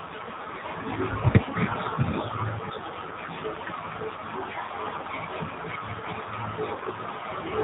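From the start the speech is squeezed through the AMR narrowband mobile codec: nothing above 4 kHz, and a buzzy, synthetic edge that fits a low rate around 7.4 kbps. Then come AMR bit errors, at 4.86 to 5.09 s and again at 6.74 to 6.93 s. A few percent of the weakly protected bits got flipped, misplacing the excitation pulses, so pitch and level hold but the voice turns hoarse and gargly.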